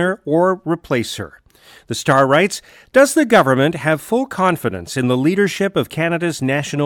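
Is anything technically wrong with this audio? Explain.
No, the speech signal comes through intact with nothing technically wrong with it.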